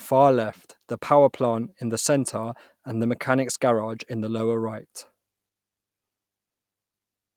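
No technical fault can be heard anywhere in this recording of speech, with the signal's level, continuity and frequency content all holding steady from its opening moment to its last.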